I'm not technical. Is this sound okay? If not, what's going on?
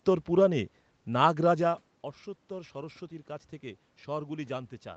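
No. From about 2.48 s to the end, the automatic gain is rising: the input got much quieter, so the call's level control slowly turned itself up to compensate. You can tell it apart from someone simply moving relative to the microphone, as happens around 1.5 s, because here the room noise swells along with the voice, climbing steadily over the last two and a half seconds rather than the voice alone changing.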